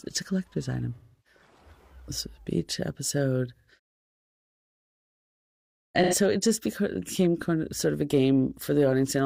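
AAC frame loss with concealment occurs three times. The first runs from 0.95 to 1.40 s. About 0.3 s of audio is missing there, which fits a run of seven lost frames. The second spans 3.55 to 3.71 s, with about 0.13 s missing. The third spans 6.03 to 6.15 s, with about 85 ms missing. In each gap the decoder rebuilt the sound from the last good spectrum. The result is a smeared, noisy or phasey patch.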